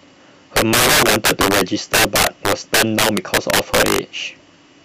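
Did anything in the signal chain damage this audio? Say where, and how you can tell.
Yes. A fixed-point gain stage, most plausibly in the sample-format conversion, let this speech run about 14 dB past full scale without limiting, so it suffered integer overflow throughout. Every peak beyond the top of the range wrapped around to the opposite extreme, affecting something like 7 percent of samples. On louder syllables this produces violent, snapping cracks that are far harsher and more abrupt than ordinary clipping, because the waveform jumps across the entire range.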